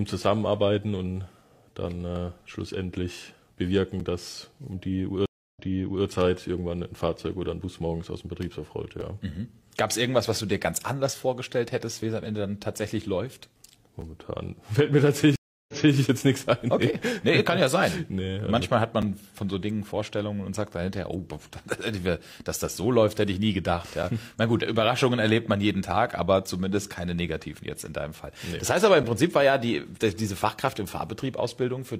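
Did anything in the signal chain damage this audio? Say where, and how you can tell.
Yes, in two ways. The first is a gap between chunks, introduced at the storage or playback stage. Short holes of about 7 ms with hard edges fall every 5 s, at 4.00, 9.01, 14.01, 19.02, 24.03 and 29.03 s. The audio was cut into 5-second pieces and each join carries a sliver of padding or a late start. Nothing is lost, but the flow is interrupted. On a spectrogram these show as thin, evenly spaced blank vertical stripes. The waveform drops abruptly to silence.

The second is a stream reconnect, a network-stage fault, heard twice. From 5.26 to 6.06 s the sound goes silent for 286 ms, then resumes about 0.51 s earlier than where it stopped, so material repeats. From 15.36 to 15.96 s there is 324 ms of silence and the sound restarts 0.28 s back. The connection dropped, a fresh decoder started mid-stream, and the server resent a burst. 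The waveform shows a flat stretch followed by a brief fade-in and a repeated segment.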